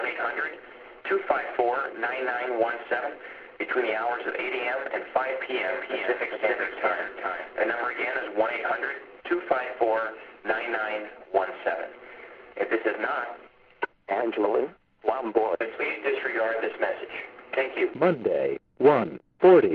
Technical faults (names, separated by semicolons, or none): doubled audio track